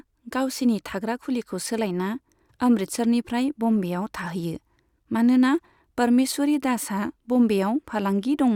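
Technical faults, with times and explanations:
No technical faults are audible anywhere in the speech recording.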